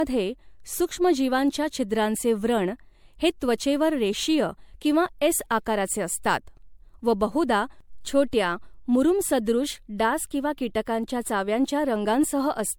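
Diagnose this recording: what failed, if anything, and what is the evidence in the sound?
The codec stage is the likely failure: the speech appears to have been MP3-encoded and decoded repeatedly, around five generations, at a rate consistent with 96 kbit/s. This generation loss runs throughout. Each re-encode requantises on a shifted frame grid, so errors and spectral holes accumulate. The result is a swirly, hollow, smeared texture beyond what one pass at that rate would give, with blurred consonant attacks, and nothing above 19.9 kHz.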